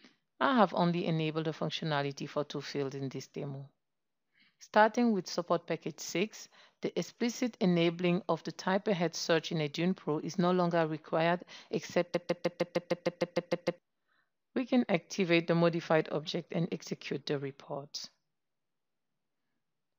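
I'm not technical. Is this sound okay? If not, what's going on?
No. Something in the playback or streaming chain likely stalled and kept replaying its last scrap, a broken-record loop: from 12.15 to 13.78 s, a 0.15-second piece repeats 11 times, replacing the sound that belonged there.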